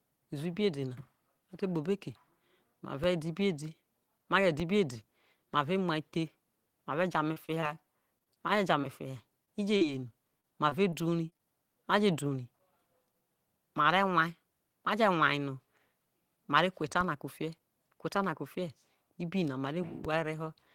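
A speech recording with two DC steps, at 4.60 s and 20.05 s. Each is a low thump where the waveform's zero line jumps, then drifts back as a roughly 2 Hz high-pass pulls the offset out. Repeated packet loss gives robotic, choppy sound from 7.33 to 8.85 s and 9.45 to 11.41 s, with holes up to 25 and 40 ms patched by repeating the last sound. On a spectrogram this shows as smeared, repeated slices.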